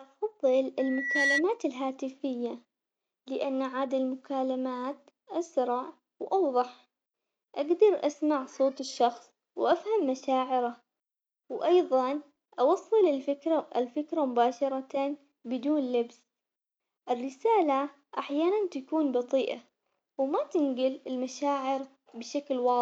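At 0.79 s a loudspeaker feedback squeal begins and runs until 1.44 s. A single tone at 2 kHz rises out of the speech. It swells over roughly 0.4 s and ends up somewhat louder than the talker. The microphone is picking up the loudspeaker it feeds. At 2 kHz the loop gain passes one, so that frequency keeps reinforcing itself.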